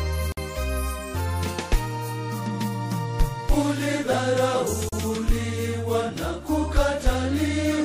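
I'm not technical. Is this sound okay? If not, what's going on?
No. The audio was encoded in separate pieces and joined without trimming the silent padding each piece carries, a gap at a join of encoded pieces. You hear brief dropouts at 0.32 s (about 52 ms) and 4.89 s (about 37 ms), after which the sound resumes where it stopped.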